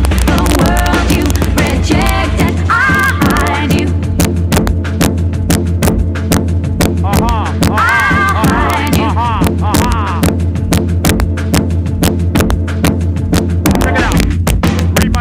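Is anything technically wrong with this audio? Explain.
Yes. Integer overflow runs throughout: peaks pushed about 1 dB past full scale wrap to the opposite sign, giving sharp cracks on the loudest moments, seen as full-height vertical jumps in the waveform and broadband spectrogram streaks on a small fraction of samples.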